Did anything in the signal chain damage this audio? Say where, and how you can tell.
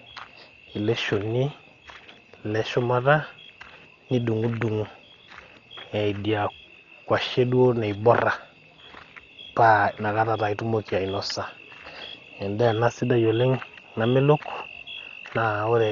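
Yes. The damage happened at the codec stage and runs through the whole speech clip, most likely from low-bitrate Dolby Digital compression. With too few bits, the encoder narrowed the band and gave many frequency lines no mantissa data, so the decoder filled them with dither noise. Nothing is heard above about 6.9 kHz, which makes the speech dull, and a rough, fluttering noise clings to voiced tones. Damage this heavy points to a bitrate around 40 kbps.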